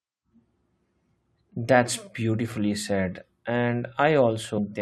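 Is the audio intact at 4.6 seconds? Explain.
No. Compressed frames are skipped at 4.57 s. Whole frames of the encoded audio never reach the output, so playback jumps straight ahead by roughly 300 ms of material, which fits about fifteen frames of 21.3 ms each. The sound resumes abruptly further along.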